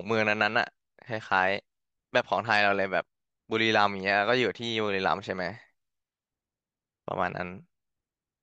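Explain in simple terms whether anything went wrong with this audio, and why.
Nothing went wrong with this recording; the speech signal stays intact and steady the whole way, with no technical problem to be heard at any point.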